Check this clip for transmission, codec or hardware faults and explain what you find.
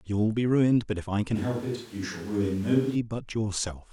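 One fault stands out. Switch to a distant microphone, 1.37 to 2.94 s: the close microphone's feed likely dropped out, leaving a pickup further from the talker. The speech abruptly turns roomy, hollow and thin in the bass, with room noise roughly 25 dB below it at about the same level, then snaps back.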